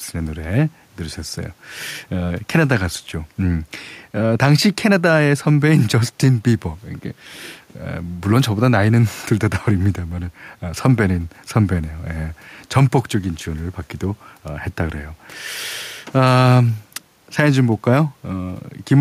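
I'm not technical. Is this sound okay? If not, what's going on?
Yes, this recording sounds fine; nothing's wrong here.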